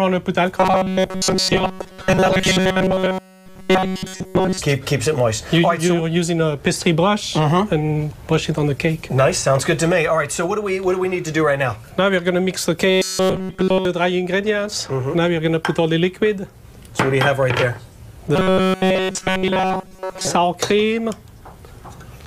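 From 0.57 to 4.59 s, 12.90 to 13.85 s and 18.36 to 20.27 s, robotic sound from repeated short buffers gives a rigid 188 Hz buzz. A roughly 5.3 ms chunk is likely looped, mostly in the first stretch and wholly in the others, showing identical waveform cycles and flat spectrogram harmonics.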